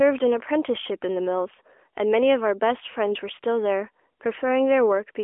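No technical faults are audible.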